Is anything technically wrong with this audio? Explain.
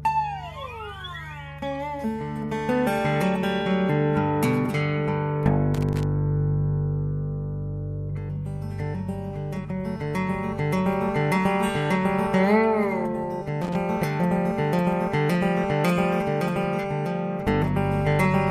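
Yes. There is loose connector crackle at two points: from 5.74 to 6.03 s, and again from 13.62 to 13.76 s. A worn or dirty contact somewhere in the signal chain is momentarily losing and regaining connection, so the audio is chopped on and off in rapid, uneven succession. Each burst comes across as an irregular scratchy crackle, the first lasting about 0.3 s and the second about 0.14 s.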